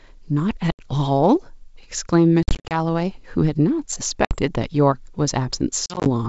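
Packet loss on an ADPCM call cuts hard silent gaps at 0.72–0.89, 2.43–2.77 (scattered), 4.25–4.37 and 5.86–6.09 s. These show as flat waveform and blank spectrogram columns, followed by slightly distorted speech while the decoder's predictor resynchronises.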